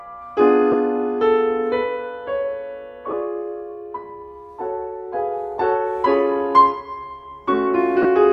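Lost LE Audio frames occur at 0.72 s, 3.11–3.13 s, 5.59 s and 8.02–8.05 s, gaps of 15, 15, 7.5 and 22.5 ms, consistent with whole 7.5 ms LC3 frames. The decoder refills each gap with the previous spectrum under randomised signs, so tonal content briefly smears into a noisy burst.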